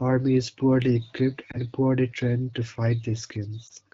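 A speech clip with two lost AMR speech frames. Brief dips occur at 1.51 to 1.58 s and at 3.67 to 3.72 s. Each sounds like a short warble where the level drops and recovers. Radio errors corrupted the frame, so the decoder reused the previous pitch and vocal tract settings at reduced gain. The gap fits a single lost 20 ms frame. The wideband AMR coding sounds light, consistent with a clear-speech rate near 12.65 kbit/s.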